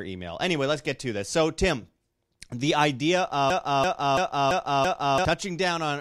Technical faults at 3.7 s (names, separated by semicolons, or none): broken-record loop